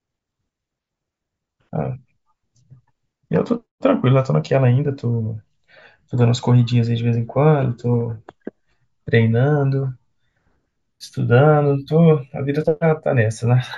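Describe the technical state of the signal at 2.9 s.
At 2.9 s the speech signal is intact, with no audible fault of any kind at that point.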